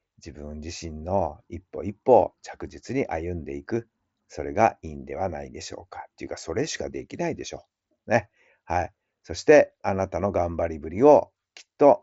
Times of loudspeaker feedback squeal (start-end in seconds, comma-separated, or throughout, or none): none